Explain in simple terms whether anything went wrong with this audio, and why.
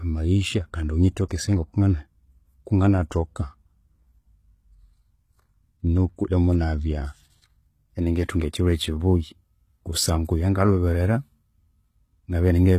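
The recording was likely squeezed with HE-AAC compression, which keeps only the lower part of the sound and fakes the treble by copying lower tones upward. Nothing is left above 15 kHz, and the rebuilt top end makes the s sounds gritty and metallic throughout this speech.

At about 1.29 s, right after "amayisha kandi", there is pre-echo. The compression spreads its noise over a whole short chunk of sound, so a short hiss of about 20 ms arrives before a sharp sound, which then starts soft and smeared.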